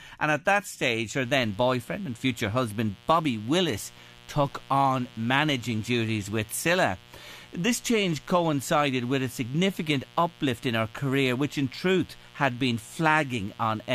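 From 1.22 s to the end, a mains buzz runs about 25 dB below the speech. Sharp switching spikes from the 60 Hz supply leak in, and their harmonics reach several kHz. That makes it rasp, where plain hum would stay a smooth, low tone.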